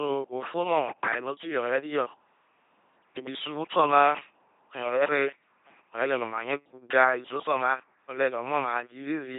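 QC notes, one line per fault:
Throughout: LPC-10 vocoder. The speech comes through as a heavily damaged, buzzing, mechanical robot voice. The codec does not keep the waveform. It models each short stretch as a filter of up to ten poles, driven by either a pulse train or noise. Each moment is forced to be fully voiced or fully unvoiced, so natural breathiness and texture are lost. The flat, synthetic quality fits a rate of about 2.4 kbit/s.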